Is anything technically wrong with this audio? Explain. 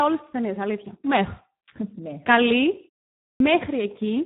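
Yes, there are two faults.

Throughout the speech, heavy Speex codec damage makes it hoarse and noisy. The CELP coder has too few bits to model the excitation, which fits a low rate around 8 kbps. A spectrogram shows a hard ceiling near 3.8 kHz and smeared harmonics.

At 3.29 to 3.40 s, a clipped start after a pause cuts about 110 ms from the sound following a 0.48 s silence, because the output device was still waking. The speech bursts in abruptly, and the waveform jumps from flat straight into speech with no onset.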